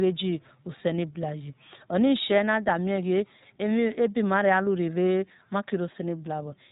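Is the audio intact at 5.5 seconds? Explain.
No. At 5.5 seconds, as throughout the clip, the speech sounds slightly rough and synthetic with nothing above 3.8 kHz, the mark of the iLBC codec coding each 20 ms frame independently.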